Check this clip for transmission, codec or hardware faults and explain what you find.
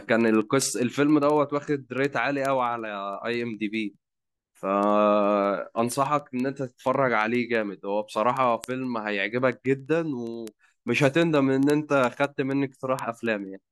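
A clocking fault on the digital link: word clock ticks run through the speech from 0.14 s to 13.67 s. The receiver isn't locked to the sender's clock, a mismatch of about 300 ppm, so it slips a single sample roughly every 70 ms. The result is sharp ticks of uneven strength, whose steady rhythm sets them apart from random crackle.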